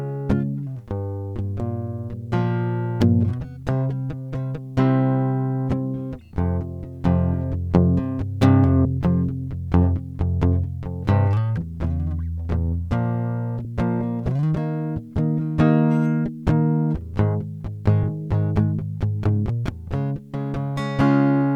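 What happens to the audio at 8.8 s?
Compressed frames skipped at 8.85 s: a short stretch of the encoded music never reaches the output, either missing from the file or rejected by the decoder as damaged, so playback jumps forward. The gap of roughly 70 ms points to about two lost 32 ms frames. At the join, the music resumes slightly ahead of where it left off.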